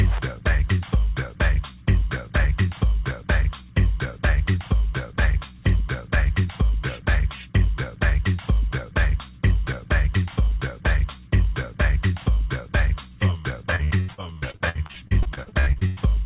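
From 13.76 to 16.00 s the sound turns choppy and robotic, with pieces dropping out in quick succession. This is repeated packet loss: about twenty holes open over that stretch, the longest around 95 ms, and each is patched by stretching the preceding sound, so roughly a third of the span is concealment. The whole clip stops at 4 kHz, which points to a narrowband call codec such as G.711.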